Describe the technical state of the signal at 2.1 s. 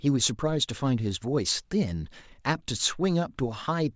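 At 2.1 s the speech signal is intact, with no dropout, distortion or other fault at that point.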